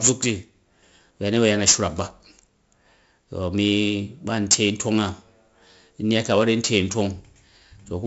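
Throughout the speech, 4-bit ADPCM compression leaves a gritty hiss riding on every louder syllable, with roughness on sharp onsets where the coarse adaptive step lags the waveform. Heavy damage and no content above 7.7 kHz point to a 16 kHz rate.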